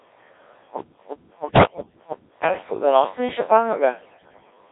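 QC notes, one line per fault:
Throughout: Codec 2 vocoder. The speech sounds robotic and buzzy because it is rebuilt from pitch, voicing and a coarse spectral envelope rather than kept as a waveform. The very thin, heavily damaged result points to roughly 1.3 kbit/s. A spectrogram shows smeared harmonics confined to about 300 Hz to 3.7 kHz.
0.80–2.44 s: stutter with silent gaps. A 163 ms burst of sound repeats five times, each followed by about 174 ms of digital silence, so it returns every 337.5 ms. The likely cause is a stalled stream replaying its last fragment on each retry. The waveform shows identical blocks separated by flat, silent gaps.
1.44–1.98 s and 4.00–4.51 s: bit errors on digital voice radio. Corrupted bits reach the low-rate vocoder's frame parameters, so pitch, level and tone colour jump erratically into bleeps and warbling gibberish. The first stretch is worse, with around a tenth of bits wrong. 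A spectrogram shows abrupt, disjointed harmonic jumps frame to frame.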